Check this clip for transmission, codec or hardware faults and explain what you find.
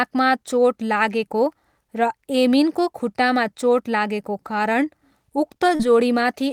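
There is one transmission fault: a short concealed packet loss at about 5.75 to 5.81 s in this speech clip. Around 40 ms of the audio stream did not arrive at the decoder in time, and the receiver synthesised about 38 ms to cover the gap by extending the preceding signal, pitch-based if voiced or shaped noise if not, before crossfading back to the real audio. It is audible as a brief smear or wobble in the speech at that point.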